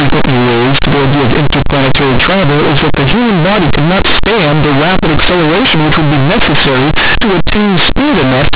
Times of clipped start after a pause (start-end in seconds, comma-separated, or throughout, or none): none